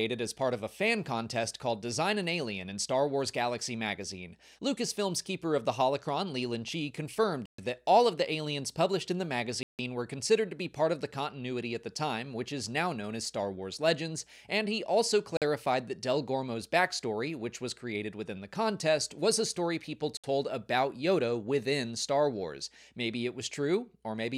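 Four short dropouts at 7.46 s (127 ms), 9.63 s (159 ms), 15.37 s (47 ms) and 20.17 s (65 ms), likely Bluetooth stalls where the buffer ran dry, appear as flat waveform gaps and blank spectrogram columns.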